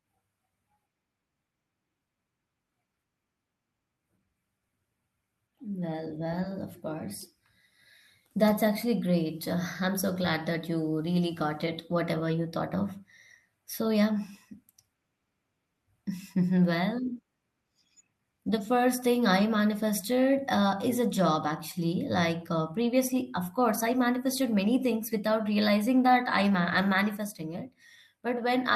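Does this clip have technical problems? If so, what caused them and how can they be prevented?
No, there's nothing technically wrong to hear in this speech recording, so there's nothing here that needs fixing or preventing.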